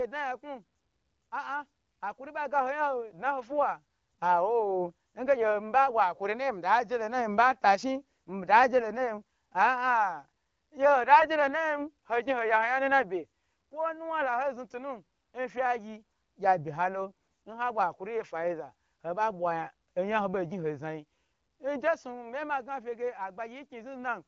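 At 11.12 to 11.27 s and again at 17.21 to 17.41 s the speech turns briefly hoarse and gargly. Those are AMR bit errors: corrupted unprotected bits misplace the excitation pulses and skew gain and spectrum, while pitch and level roughly hold. The second burst sounds rougher, fitting a higher error rate.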